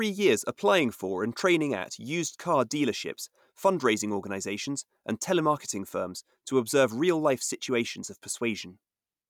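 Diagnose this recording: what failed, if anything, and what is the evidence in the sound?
Nothing failed in this recording, and the sound gives no evidence of a fault at any stage.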